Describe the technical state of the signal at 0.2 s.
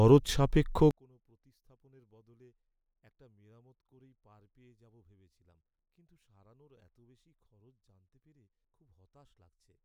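At 0.2 s the signal is intact, with no dropout, clipping, distortion or other technical fault.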